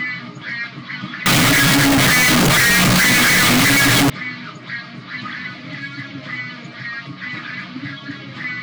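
Float read as integer, from 1.26 to 4.10 s: the samples were likely stored as 32-bit float but read as 32-bit integer, so sign and exponent bits dominate each value. The waveform turns nearly square at an almost fixed, high level, producing very loud, harsh sound with background noise raised to match everything else.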